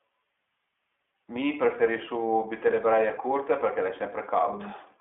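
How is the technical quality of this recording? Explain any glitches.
Quality is limited throughout by one fault. From start to finish the speech sounds thin, boxed-in and a little rough and synthetic, with nothing above 3.6 kHz and little below 250 Hz. This is plainly audible iLBC codec damage. Each 20 ms frame's excitation is coded independently, which fits the 15.2 kbps mode, leaving that grainy narrowband texture.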